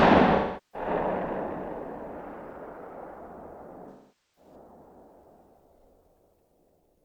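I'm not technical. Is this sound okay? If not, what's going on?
No. There are two short stretches of AAC frame loss with concealment, from 0.35 to 0.88 s and from 3.89 to 4.55 s, each about half a second. Chunks of the compressed audio went missing, and the player covered each gap by guessing from the sound just before it. That is why these patches sound smeared rather than dropping to clean silence or giving a sharp click.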